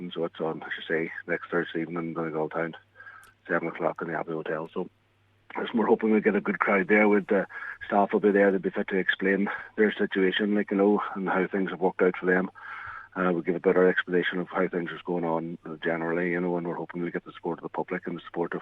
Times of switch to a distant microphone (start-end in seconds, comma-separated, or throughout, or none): none